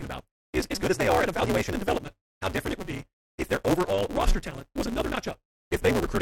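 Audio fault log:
throughout: block size mismatch (truncated), block ends are discarded, so a 188 Hz buzz accompanies speech running 1.88 times fast at normal pitch, unlike resampling.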